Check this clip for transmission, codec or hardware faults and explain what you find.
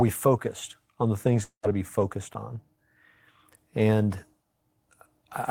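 There's one fault in this speech clip. From 1.43 to 1.65 s, right after "focused on the things", a long network dropout likely cut the stream. The last sound smears into a fading buzz and then about 90 ms of silence, and it resumes at "to be focused on" with roughly 200 ms gone.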